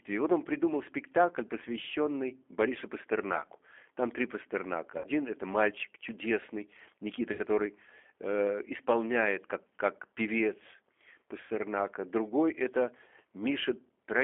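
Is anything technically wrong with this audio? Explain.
Yes. The speech runs through the G.729 codec for the whole clip, at 8 kbit/s, inside a 250 Hz to 3.4 kHz telephone band. The codec rebuilds each 10 ms frame from a vocal tract filter, a pitch predictor and a few pulses, so the speech is plainly rough and synthetic.

VoIP packet loss concealed by the speech codec occurs at 4.98 to 5.07 s, 7.33 to 7.41 s, and 11.41 to 11.52 s just after "как певец". About 60, 60 and 90 ms of audio are missing. The decoder stretches the last pitch and filter into a fading buzzy tone or coloured noise, and the voice stays weakened briefly as it recovers.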